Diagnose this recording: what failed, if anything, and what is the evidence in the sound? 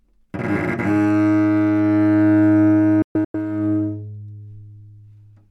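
From 3.02 s to 3.35 s the everyday sound drops out in a cluster of short silent holes. Each cut is abrupt, with only about a 3 ms fade, and the longest hole lasts 128 ms. Across that 320 ms stretch about 224 ms is missing, which fits roughly seven lost frames of about 32 ms. This is a digital broadcast dropout at the reception and decoding stage: corrupted or missing frames made the receiver mute until good frames resumed, so the audio from those gaps is lost.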